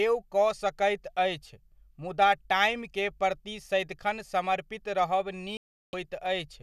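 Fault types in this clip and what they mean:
Digital broadcast dropout: at 5.57 s the speech cuts to silence for about 0.37 s, returning at 5.94 s. The receiver stopped getting decodable frames, fitting roughly fifteen lost frames, and muted its output until valid data resumed, so whatever was transmitted during that gap is gone.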